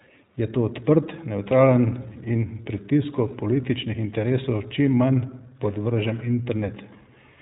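From start to end the speech carries iLBC codec damage, plainly audible: nothing passes above 4 kHz, and each 20 ms frame's excitation is coded on its own, giving a rough, slightly synthetic texture that fits a 15.2 kbps stream. A spectrogram shows a hard ceiling at 4 kHz.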